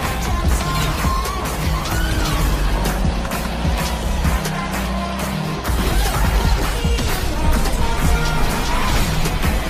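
No technical faults are audible.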